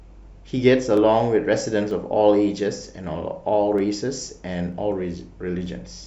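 From 0.97 to 5.66 s, roughly seven clicks arrive every 0.94 s, likely clock drift buffer slips; unlike random dropouts, their spacing never varies.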